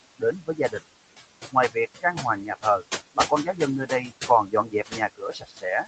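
Speech recorded over room noise, heard through a call path whose audio stops at 8 kHz, carries noise suppressor artifacts throughout. The suppressor pulls down the bands it judges to be steady noise by about 21 dB, frame by frame, so the background drops away in the pauses and swells back under the talking. On a spectrogram the gaps look nearly empty while a noise floor reappears beneath each phrase. The same suppressor also produces speech cut by the noise suppressor in four places: 0.4–0.81 s, 3.15–3.59 s, 4.47–5.0 s and 5.16–5.65 s. Quiet consonants and word endings are mistaken for noise and turned down, by about 14 to 20 dB at worst, the deepest near the end. Each stretch loses somewhere between about 150 and 400 ms of speech. Those sounds come across as swallowed, and the waveform shows abrupt dips in the envelope where syllables should taper. In the spectrogram, faint high-frequency consonant energy goes missing in those spans.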